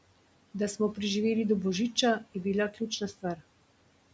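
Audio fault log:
2.71–3.41 s, speech cut by the noise suppressor: after "do božica je bila", brief stretches totalling about a fifth of a second sound swallowed, dipping by about 14 dB, because the suppressor mistook quiet speech for background.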